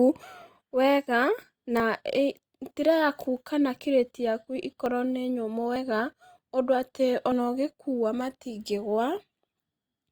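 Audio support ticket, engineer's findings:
Abrupt forward skips in the speech, no silence, at 0.42, 1.8, 4.86 s (after "yaku kana kirĩti yaku"), 5.76 and 7.32 s (after "undũ atĩ"). Likely dropped buffer (overrun): capture read too late, about 20–70 ms lost each time, remaining audio spliced together.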